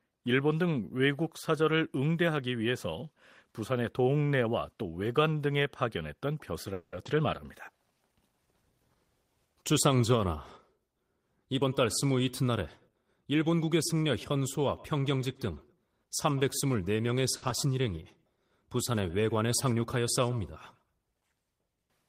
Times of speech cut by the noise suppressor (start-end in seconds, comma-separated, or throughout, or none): none